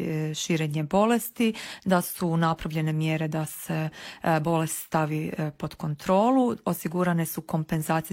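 No technical faults can be heard anywhere in the audio.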